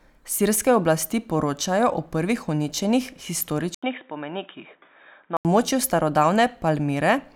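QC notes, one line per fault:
3.75 to 5.45 s, input switched to a poorer device: At 3.75 s the speech cuts out for about 80 ms. It then returns dull and boxy, with nothing above 3.8 kHz, a few dB quieter, and with a faint new background hiss well below the speech. At 5.45 s the full, brighter sound comes back. The likely cause is the input moving to a narrower-band microphone or a headset call profile, which brings its own tone, level and noise floor.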